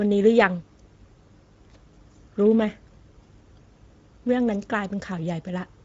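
Speech running the whole clip through Speex codec compression, plainly audible as a noisy, hoarse CELP texture that points to a mid-range bitrate near 17 kbps. A spectrogram shows a hard ceiling at 7.7 kHz, with no energy above that line at any point.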